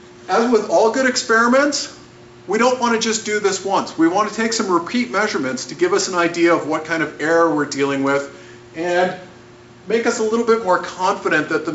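No technical faults are audible.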